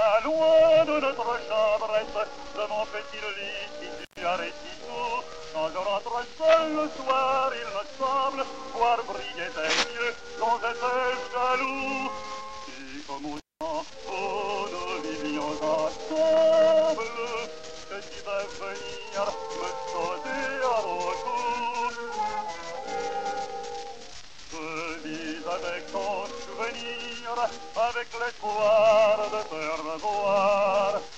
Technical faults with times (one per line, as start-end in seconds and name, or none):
3.99-4.23 intermittent contact
13.37-13.62 intermittent contact